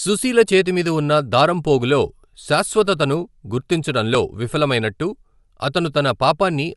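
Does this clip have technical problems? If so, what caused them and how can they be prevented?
Yes. Throughout the speech, audible Bluetooth LC3 compression gives a breathy, grainy edge, likely from an LC3 transform codec, consistent with 10 ms frames and a roughly 48 kbps stream. A spectrogram shows a flat ceiling with nothing above 11.6 kHz. Recording over a wired link or a higher-bitrate connection would prevent this.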